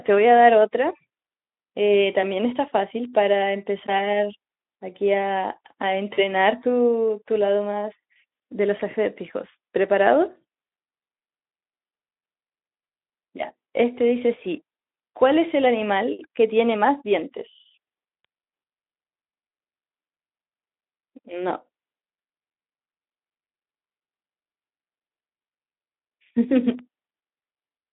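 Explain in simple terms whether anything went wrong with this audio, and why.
Three short ticks and two brief smears interrupt this speech recording.

The ticks, at 3.05, 18.25 and 26.79 seconds, are bit error spikes. A single digital value got corrupted, so the waveform jumps for an instant and snaps straight back. At 18.25 s the damage covers two neighbouring samples rather than one. What sets these apart from ordinary clicks or crackle is that each one is a lone, razor-thin tick with no connection to what is being said, and nothing around it is affected.

The smears at 6.13 to 6.22 seconds and 8.77 to 8.81 seconds are VoIP packet loss concealed by the speech codec. Chunks of the call never arrived, about 40 ms at the first spot and 20 ms at the second. The decoder filled each gap by stretching the last bit of voice it had into a fading buzzy tone or coloured noise. Unlike a tick, this lasts a noticeable moment, and the voice sounds weak or distorted for a short while after the real audio resumes.

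Underneath all of this, the telephone-style Speex codec lends the whole clip a narrow, lightly processed sound.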